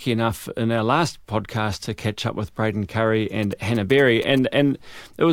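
Speech, with GSM signalling bursts from about 3.43 s to 4.39 s: a galloping dit-dit-dit of short buzzes at roughly 20 dB below the speech. A nearby 2G phone is signalling with short groups of radio bursts, and the audio circuit rectifies them into sound. The buzz repeats at 217 Hz, the GSM frame rate. The gapped, galloping rhythm marks it as signalling. A phone in an active call with its user talking gives a steady, unbroken 217 Hz buzz instead.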